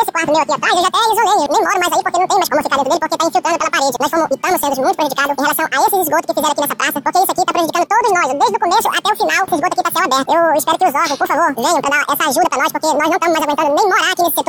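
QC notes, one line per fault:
Throughout: audio read two samples at a time (double speed). The reader treats each consecutive pair of samples as a single frame, as if the stream were two channels or samples twice as wide, so every frame consumes twice the data it should. Playback therefore runs at 2x speed and the pitch rises a full octave, 12 semitones.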